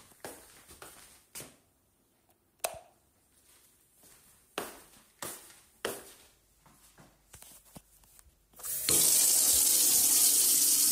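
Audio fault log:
No audible faults in this recording of sounds.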